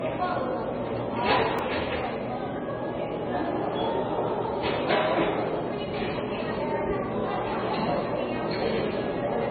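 Throughout the clip the audio sounds dull and watery, with a swirling, unstable texture and nothing heard above 4.5 kHz. The likely cause is heavy MP3 compression. The damage points to a very low bitrate, around 16 kbps, so the encoder cut the treble and let weak frequency components flicker in and out between frames.

At 1.59 s there is a click or brief buzz where a repeated buffer occurred. When fresh audio failed to arrive, the same 2.67 ms fragment was played a second time with hard joins, which fits a 128-sample buffer. A few milliseconds of the real signal were lost.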